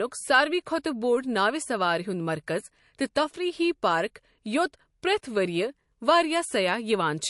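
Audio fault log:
throughout: MP3 compression, likely near 48 kbps. The treble is cut flat at 11.3 kHz, and the speech carries plainly audible watery, swirly coding damage.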